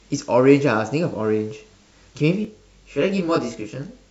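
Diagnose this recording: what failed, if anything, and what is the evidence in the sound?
Channel delay (comb filtering) sets in at 2.45 s and runs to the end. The speech turns rough and slightly doubled. One channel lands roughly 20 ms late, likely a buffer slip in the driver, so the mono sum cuts closely spaced notches from around 20 Hz upward.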